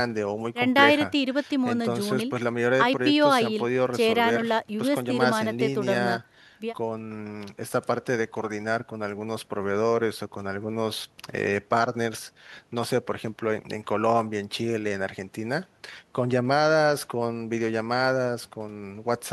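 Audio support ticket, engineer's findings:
No faults found on review.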